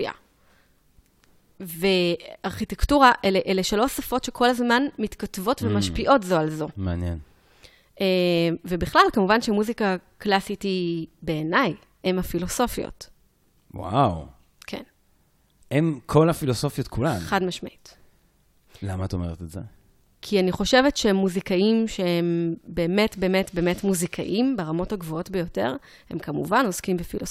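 No technical faults can be heard in this speech recording, which carries its signal without any audible disturbance.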